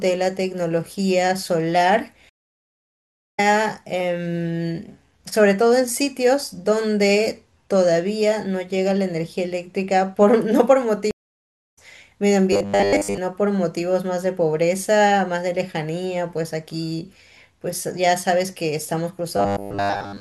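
At 2.29 s a stream reconnect occurs. The connection drops, leaving about 1.06 s of silence. The speech then resumes roughly 0.7 s further on, skipping some content.

From 5.49 to 10.51 s, channel delay causes comb filtering. One channel lags by about one sample, and summing to mono cancels the top end. The first notch falls near 20 kHz, so the speech sounds slightly dulled.

At 11.11 s a second stream reconnect cuts out about 0.61 s. When the speech returns, it has jumped roughly 0.3 s ahead.

From 12.53 to 13.18 s, and again from 19.37 s to the end at 20.20 s, the speech turns into robotic sound. A rigid metallic buzz at 100 Hz rides on it. This is likely from repeating 10 ms buffers while most of the real audio is skipped.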